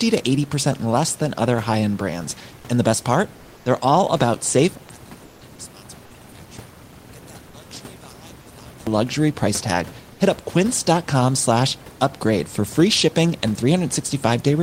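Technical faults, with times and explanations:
3.36 to 3.65 s and 5.24 to 5.41 s, comfort noise in place of the background: Right after "best part", and again after "all about safe", the room background briefly turns into a smooth, featureless hiss about 1 dB quieter, lasting 290 ms and then 170 ms. These pauses sit about 29 dB below the loudest speech. The likely cause is discontinuous transmission, such as Opus DTX: the sender stops sending during the pause, and the receiver fills the gap with synthetic noise roughly matched to the background.
4.89 to 8.87 s, one channel inverted: From just after "all about safe" until "luxury price tag", the speech collapses by about 26 dB into a faint residue, almost as if it had been switched off. The room noise, normally about 25 dB below speech, nearly vanishes along with it. This likely comes from one stereo channel having reversed polarity. When the two channels are summed to mono, the centred speech common to both cancels, and only their small differences remain.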